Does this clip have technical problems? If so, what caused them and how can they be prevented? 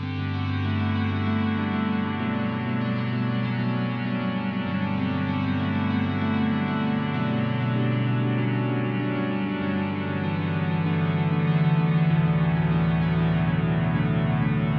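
No, no technical problems can be heard in this clip. Since nothing has gone wrong, there is no cause to trace and nothing to prevent.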